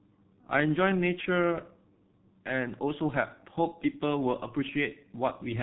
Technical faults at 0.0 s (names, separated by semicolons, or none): G.723.1 codec